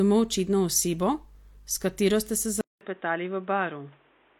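At 2.36 s a single sharp click marks dropped samples, likely a couple of samples missing from the stream so the waveform jumps abruptly. From 2.61 s the input switched to a poorer device, likely a headset or second microphone. After a 200 ms silence, the speech turns dull, drops about 5 dB, and carries new noise about 35 dB down.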